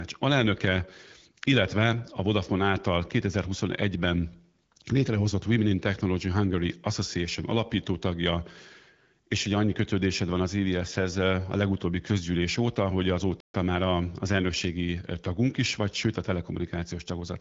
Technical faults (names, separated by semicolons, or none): playback stall